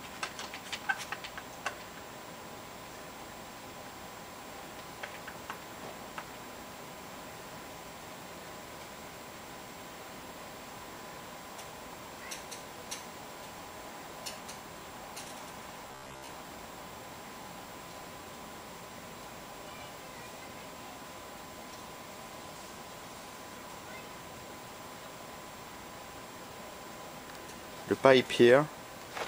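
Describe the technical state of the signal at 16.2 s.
At 16.2 s the signal has robotic sound from repeated short buffers (15.88 to 16.28 s): most of the audio is replaced by a rigid 66.8 Hz buzz, likely from a roughly 15 ms buffer being replayed.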